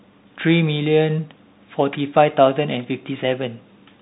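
Bluetooth CVSD headset codec damage runs through the whole speech clip. Each sample is one bit, a step up or down with adaptive step size, which fits a 64 kbps stream. The audio stops at about 3.8 kHz, sounding narrow, with plainly audible granular, scratchy coding distortion.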